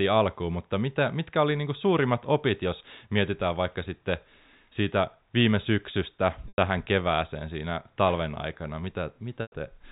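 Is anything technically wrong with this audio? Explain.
Yes, there's packet loss with pitch repetition in two spots: 6.48 to 6.58 s, right after "sitten siitä viime syksystä" and before "kevääseen siinä", and again at 9.42 to 9.52 s. Each gap is about 100 ms, which fits roughly five 20 ms packets going missing. The receiver papers over it by looping the last pitch period and fading it down, so you hear a brief held, buzzy smear sagging toward silence before the speech cross-fades back in. Everything sits inside the 4 kHz ceiling of the G.711 telephone coding.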